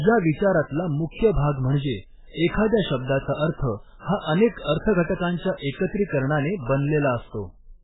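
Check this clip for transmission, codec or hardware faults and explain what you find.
One codec fault runs through the whole recording: heavy MP3 compression is the likely cause.

Across the full clip, the speech has nothing above 3.8 kHz, so it sounds dull and boxy, and s sounds lose their hiss. Starved of bits, the encoder cut the treble at a fixed point and zeroed weak frequency lines, which flicker between frames and give the voice a watery, swirly quality. The damage points to a very low bitrate, around 8 kbps. On a spectrogram there is a hard, flat ceiling at 3.8 kHz with patchy, blocky gaps below it. The waveform shows softened, smeared onsets.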